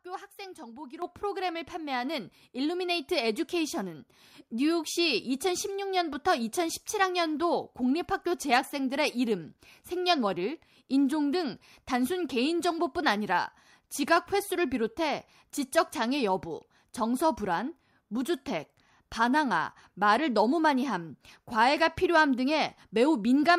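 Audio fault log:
1.02 s, microphone volume stepped up: the overall level jumps by about 9 dB in a single step, with the sound and the background noise rising together. The call software judged the input too quiet and raised the device's microphone gain at once rather than ramping it.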